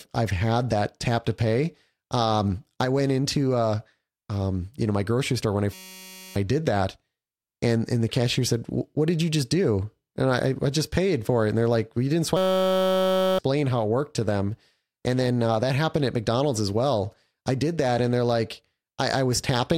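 At 5.73 s, after "grocery store when I", a system hang loop buzzes until 6.36 s. The system froze while the hardware replayed one 5.33 ms slice, giving a steady 188 Hz buzz. That fits a 256-sample buffer. It recurs from 12.37 to 13.39 s, after "you didn't".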